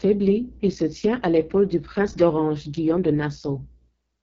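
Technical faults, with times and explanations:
Throughout: AMR wideband (HD Voice) codec. The speech is rough and raspy, with nothing above 7.5 kHz. The pulse-driven vocal tract model gets very few bits here, which fits the lowest 6.6 kbit/s mode, so the voiced sound is coarsely rebuilt and heavily damaged.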